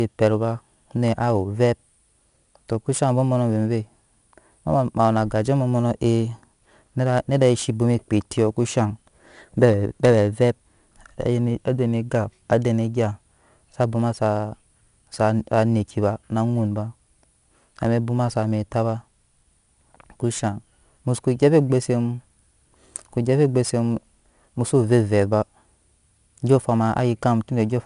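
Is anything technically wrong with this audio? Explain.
Yes. Throughout the speech there is 4-bit ADPCM compression. Each sample is coded as a coarse step from a prediction, leaving gritty hiss that rises and falls with the loudness and roughens sharp onsets. Nothing reaches above 10.6 kHz, which points to a reduced sample rate and fits roughly 89 kbps. Unlike the swirly, warbling artefacts of a perceptual codec, this damage is a level-tracking grain.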